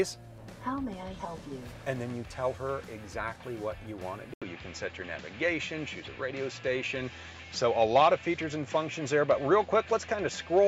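At 4.34 s the audio drops out for about 80 ms, then continues duller with nothing above 7.6 kHz and faint new background noise, likely an input switched to a poorer device.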